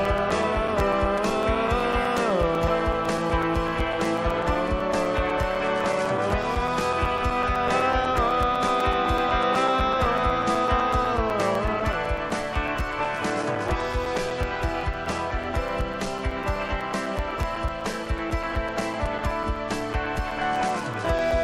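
From 0.05 s to 21.31 s, the audio shows periodic USB or driver dropouts: something in the system stalls the USB link or audio driver every 0.125 s, eight times a second, and each stall leaves a gap of a few milliseconds filled with silence. Over the run there are well over a hundred of these holes. The result is a steady, rapid ticking laid over the sound, audible wherever there is signal to interrupt.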